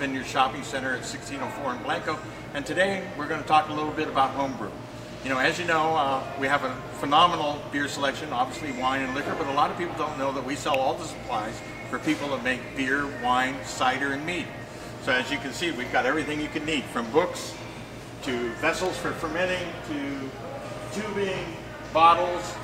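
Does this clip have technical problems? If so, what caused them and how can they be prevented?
Yes. There are two sharp snaps, at 10.74 s and 18.86 s. The first is loud, peaking around -10 dBFS. The second is quieter. Each is an electrical switching spike, likely an arc from a nearby switch or motor coupling into the audio line. Keep switching gear away from cables and use shielded, balanced runs.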